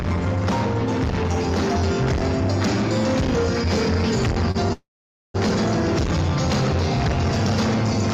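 A packet arriving late emptied the jitter buffer at 4.51 to 4.57 s, producing a short stall from a late packet: the last sound is held for 32 ms, then resumes where it stopped. Packets were likely delayed in transit at 4.73 to 5.36 s, causing a call audio freeze: the last sound carries on and fades, leaving 490 ms of silence before playback resumes. Nothing is lost, but 616 ms of gap is inserted.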